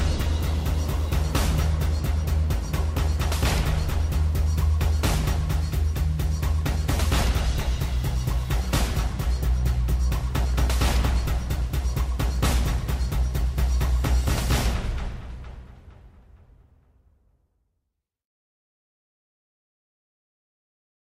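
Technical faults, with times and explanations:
No technical faults can be heard, so there are no times or explanations to give.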